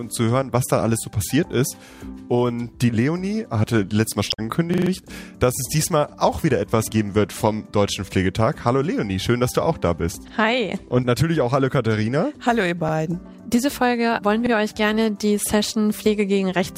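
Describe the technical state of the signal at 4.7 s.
At 4.74 s a repeated buffer starts and lasts until 4.91 s. Fresh audio arrived late, so the same 43 ms piece is played four extra times. That length fits a 2048-sample buffer. It is heard as a short stutter with hard joins. Essentially nothing is lost.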